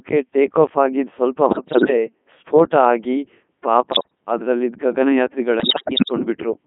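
Speech squeezed through a Codec 2 vocoder, buzzy and robotic, band-limited to roughly 150 Hz to 3.5 kHz, which fits its top 3.2 kbit/s mode rebuilding the voice from sine waves. Then bit errors on digital voice radio hit at 1.48–1.90 s, 3.92–4.15 s and 5.60–6.12 s, with the pitch, level and tone lurching into warbly gibberish as a bit error rate of around 7 percent corrupts frame parameters.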